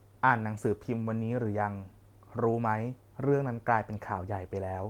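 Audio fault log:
Nothing to flag here, as the speech comes through with no faults heard anywhere in the clip.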